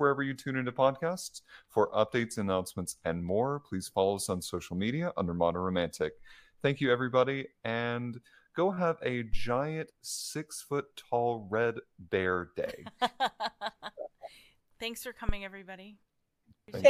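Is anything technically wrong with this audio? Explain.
Yes. A phantom power thump occurs twice: from 9.33 to 9.50 s, between "and go have a" and "six foot tall red", peaking at about -18 dBFS, and from 15.29 to 15.39 s, at about -15 dBFS. Switching the supply on a live input sends a voltage step through the coupling capacitors, heard as a deep thump decaying over 39 and 23 ms. Unlike a plosive pop, it is unrelated to the speech and is a single electrical step.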